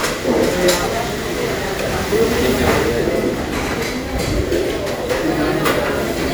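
A recording of sounds, with one burst of damaged data in a compressed stream from 0.83 to 0.87 s: a brief chirp or blip where corrupted bytes caused the decoder to misread those frames and lose sync until it found the next valid frame header.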